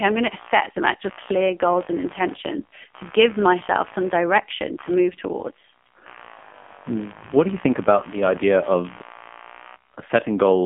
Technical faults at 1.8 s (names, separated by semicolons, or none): computer activity noise; AMR narrowband mobile codec